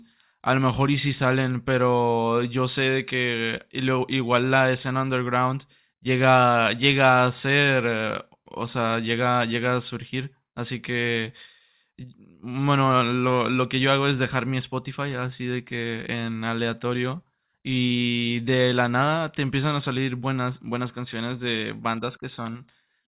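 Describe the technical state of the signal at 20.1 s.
At 20.1 s the speech signal is intact, with no audible fault at that moment.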